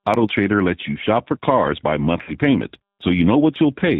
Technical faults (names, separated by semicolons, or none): G.729 codec; VoIP packet loss concealed by the speech codec